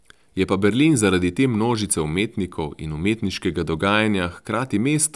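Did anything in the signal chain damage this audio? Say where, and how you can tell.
No, no stage of the signal chain has left any audible damage on this speech recording. From the wiring and converter through to playback, nothing in the sound points to a stage that altered or broke up the signal.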